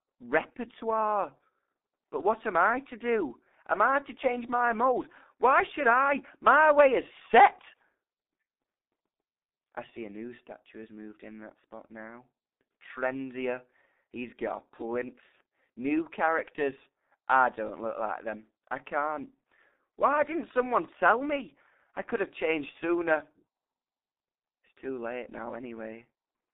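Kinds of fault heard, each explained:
G.723.1 codec: The speech was squeezed through a low-rate telephony codec that rebuilds the voice from a coarse model refreshed every 30 ms, keeping only 200 Hz to 3.7 kHz. It sounds heavily muffled and hoarse, with smeared consonants, consistent with a 6.3 kbit/s stream.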